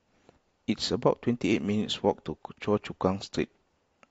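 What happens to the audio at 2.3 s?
At 2.3 s the speech is inside an adaptive stream at a lower bitrate, running from 1.52 s to the end. Codec artefacts rise, which fits a switch from roughly 96 to 32 kbit/s AAC. The change is abrupt, without a gap.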